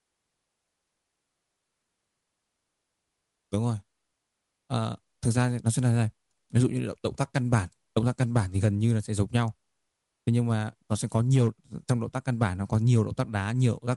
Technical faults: none

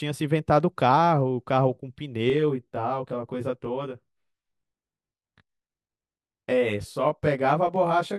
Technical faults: channel delay (comb filtering)

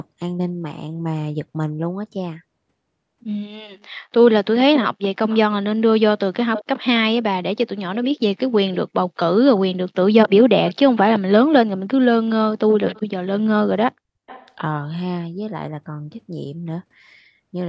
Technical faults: echo leak

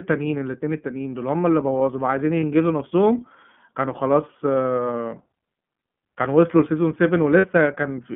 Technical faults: iLBC codec; lost iLBC frames

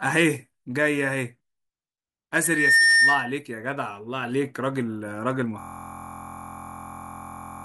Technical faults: loudspeaker feedback squeal; system hang loop

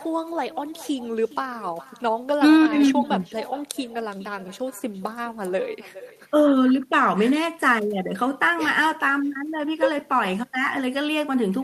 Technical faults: echo with no canceller

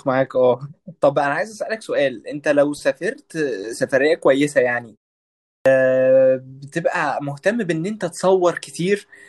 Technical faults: clipped start after a pause

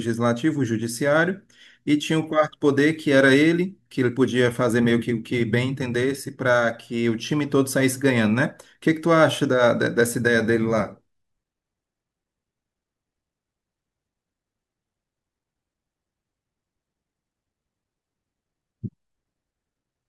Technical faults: none

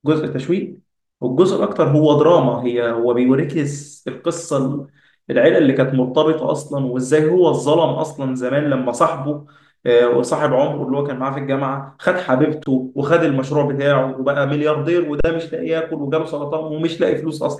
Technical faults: underrun with held sample

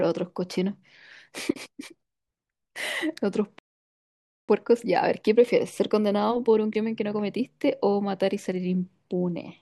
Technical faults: playback stall; time-compressed catch-up

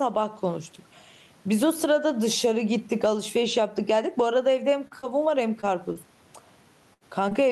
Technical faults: gain pumping; repeated packet loss (robotic sound); burst of packet loss; short concealed packet loss; lost packet rebuilt from error correction

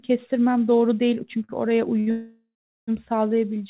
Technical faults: short stall from a late packet; call audio freeze

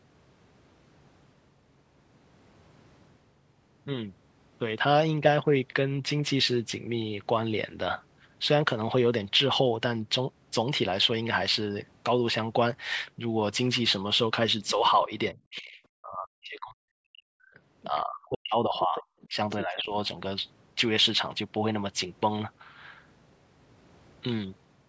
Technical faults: other side's voice leaking through; speech suppressed in double talk

